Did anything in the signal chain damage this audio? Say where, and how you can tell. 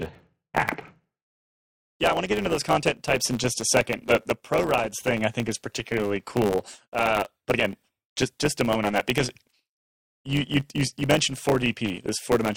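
Yes. A block size mismatch (truncated) sits at the buffer stage: the writing stage's blocks, which fit 512 samples, get their tails cut off by the reader. Throughout the speech there is a 100 Hz buzz, and delivery runs 1.07 times fast at near-normal pitch.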